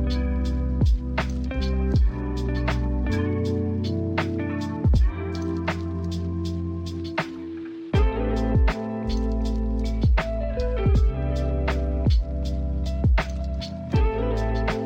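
No technical faults are audible.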